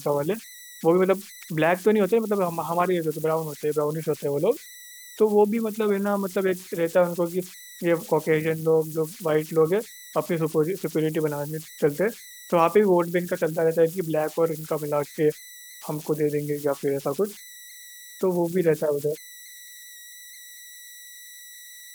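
Converter idle tones run throughout: an undithered delta-sigma converter falls into repeating bit patterns on quiet input, leaving a whistle around 2 kHz, about 21 dB below the speech.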